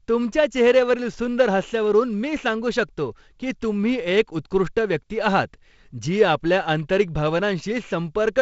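The speech carries no technical faults; it has passed through G.722 wideband telephone coding, with content reaching up to about 7.7 kHz and nothing above, and a light coding grain across the bands that fits the 48 kbit/s mode.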